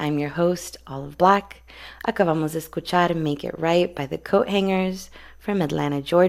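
No audible technical faults.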